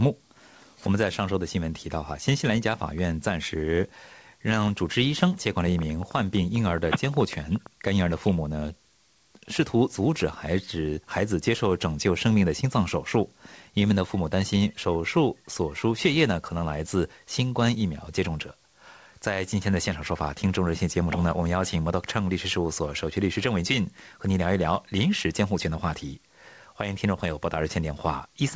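From 5.79 to 7.67 s, a train of clicks ticks over the sound, about twenty uneven pops at roughly 9.1 per second, peaking about 5 dB above the signal, likely interference or a faulty connection or power supply. The waveform shows sharp spikes, and the spectrogram shows thin vertical lines, while the G.722 call path leaves nothing above 8 kHz.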